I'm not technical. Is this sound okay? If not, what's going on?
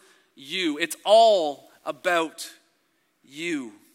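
No. Low bit depth without dither from 0.52 to 2.13 s: the speech was likely rounded to about 9 bits, so quieter parts turn grainy and gritty.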